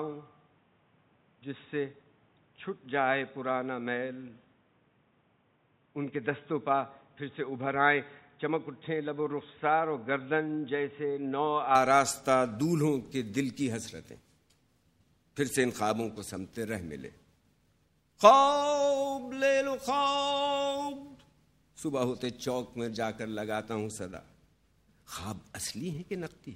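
From the start to 11.75 s the sound is dull and boxy, with nothing above 3.8 kHz, a level about 5 dB lower, and a background noise of its own sitting roughly 35 dB beneath the signal. At 11.75 s it clears abruptly, with no gap at the change. That points to an input switched to a poorer device, likely a headset call profile or a second microphone. A simple filter or EQ change would narrow the band alone, but here the bandwidth, level and noise floor all shift together in one instant.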